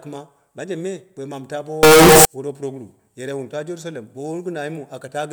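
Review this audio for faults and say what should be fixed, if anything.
From 1.83 to 2.25 s the speech turns into a loud, harsh, nearly square waveform at an almost fixed, high level. Background noise jumps to the same level as the speech. Pitch can still be followed. This is float read as integer. The likely cause is 32-bit float samples being read as 32-bit integers, so sign and exponent bits decide the level. To prevent it, make the sample format declared by the writer match the format the reader expects.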